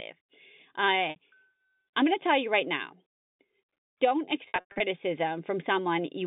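Speech carried over a G.711 telephone path, band-limited to roughly 150 Hz–3.7 kHz, shows two dropouts from packet loss with pitch repetition. At 1.10–1.16 s, 60 ms goes missing, consistent with three 20 ms packets, and the concealer holds the last pitch cycle as a brief buzzy sustain. From 4.48 to 4.80 s, about 240 ms is lost in scattered bursts over 320 ms, the longest 100 ms, so the repeated pitch fades toward silence before speech cross-fades back.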